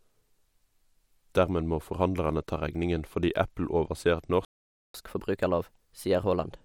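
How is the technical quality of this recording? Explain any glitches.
The recording has two linked glitches near the end.

At 4.45 s a playback stall silences the speech for 0.49 s, likely because the player's buffer ran dry or its thread was blocked, before resuming.

From 4.94 s to the end comes catch-up at higher speed: the backlog is resampled at 1.15x, so speech runs faster and sounds roughly two semitones higher.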